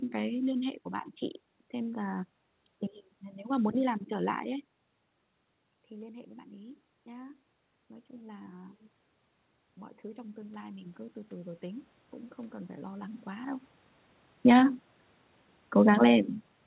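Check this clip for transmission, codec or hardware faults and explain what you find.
The clip shows one fault, automatic gain rising, in two places. From 5.96 to 8.84 s, the input level drops by about 18 dB. The automatic gain control reacts slowly, adding about 4 dB. From 10.14 to 14.84 s, it climbs again, by about 7 dB. Each time, speech and room noise swell together rather than jumping. The rise is gradual because the control ramps its gain to chase a level target. Nothing above 4 kHz comes through the call path.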